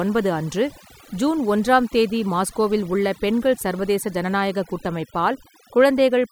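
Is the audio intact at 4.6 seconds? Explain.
No, at 4.6 s you're hearing overdone noise removal, which runs through the whole clip. The noise reducer was pushed so hard it's cutting frequency bands near its noise estimate, quieter parts of the speech included, so the background drops and breaks up into twinkly specks.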